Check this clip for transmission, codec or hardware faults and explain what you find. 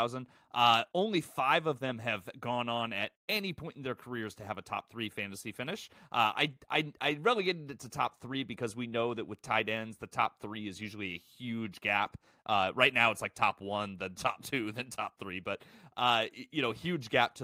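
No fault can be heard anywhere in this speech recording. There is nothing to flag against the checks that were asked for.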